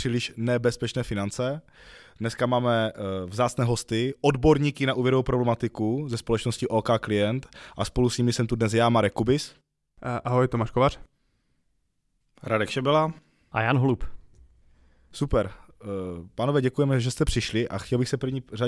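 No audible technical faults.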